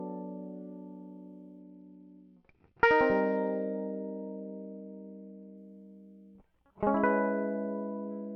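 From 1.59 to 5.57 s, and again from 7.83 s to the end, the music dulls and turns gritty: a Bluetooth SBC bit pool drop. The treble sub-bands are starved and the rest coarsely quantised, which fits a fall from bit pool 31 to 9, around 72 kbps.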